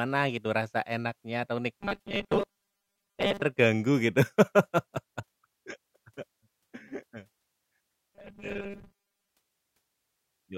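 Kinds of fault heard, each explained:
Robotic sound from repeated short buffers: after "gitu rasa enaknya atau" (1.81 to 3.43 s) and again at 8.15 to 9.29 s, speech becomes a fixed 200 Hz metallic buzz, likely a 5 ms slice replayed over most real audio. Unlike a dropout, nothing falls silent.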